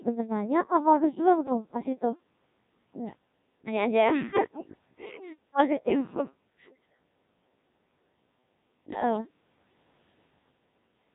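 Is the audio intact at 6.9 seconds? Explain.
No. At 6.9 seconds, as throughout the clip, the speech is rebuilt by the Codec 2 vocoder, whose heavy damage fits its 1.3 kbit/s mode. Only pitch, voicing, energy and a spectral envelope survive, resynthesised from sine waves. The result is robotic and buzzy rather than the swirly, smeared waveform of an ordinary low-bitrate codec.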